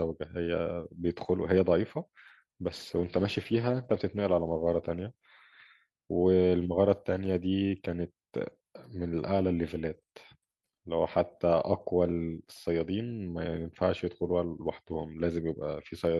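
Speech, with a call bitrate drop from 2.65 to 5.65 s: the encoder was starved of bits, so the sound turns coarse and muffled, consistent with roughly 48 falling to 15 kbps, lowest for about 1.4 s.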